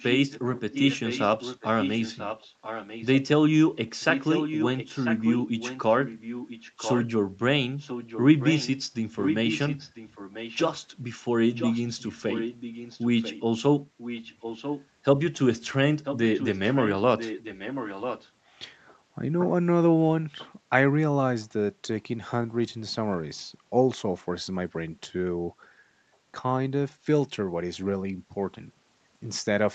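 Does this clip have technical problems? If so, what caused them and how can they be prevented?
Yes. The speech has an echo leak. A second copy of the voice follows the original about one second later. It is heard at 0.0–3.08, 4.0–7.08, 7.78–8.81, 9.18–10.81, 11.55–13.42, 13.98–14.87, 16.04–18.31 and 20.38–20.5 s. Mostly it sits roughly 10 dB below the speech. It is louder from 4.0 to 7.08 s and barely audible at 20.38 s. The likely cause is a loudspeaker on the far side whose echo canceller sent part of its microphone pick-up back into the call. Headphones on that side, or an echo canceller that handles a one-second delay, would prevent it.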